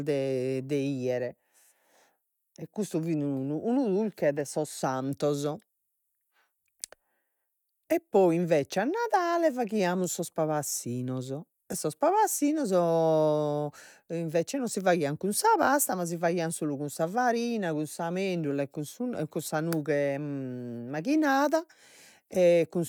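No technical faults are audible.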